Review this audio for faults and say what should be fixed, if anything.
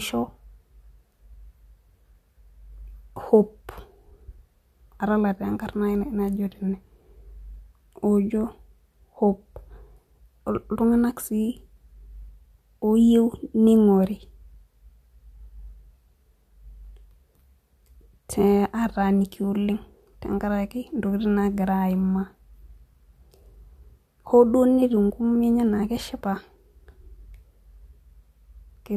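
No faults found; nothing needs fixing.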